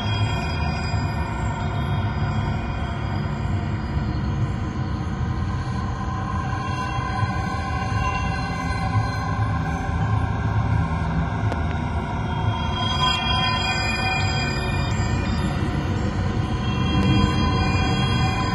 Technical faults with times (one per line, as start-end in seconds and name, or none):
11.52-11.74 loud pop
17.03-17.26 loud pop